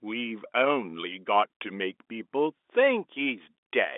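There are no technical faults to describe in time order; the speech simply carries the narrow band of G.711 telephone coding, with nothing above 3.8 kHz.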